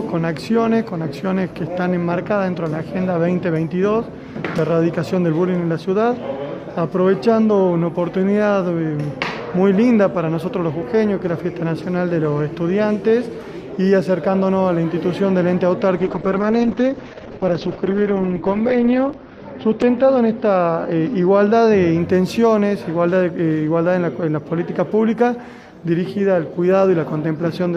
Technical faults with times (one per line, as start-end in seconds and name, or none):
15.98-22.81 call bitrate drop